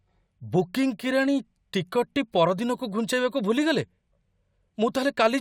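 Nothing in this speech recording stood out as a technical fault on listening.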